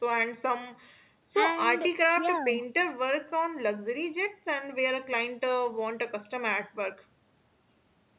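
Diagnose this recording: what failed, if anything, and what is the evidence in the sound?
Nothing failed: the speech is band-limited to 4 kHz with the coding noise expected of a narrowband call path, consistent with G.711 A-law at 64 kbps, and nothing else in the signal points to a fault at any stage.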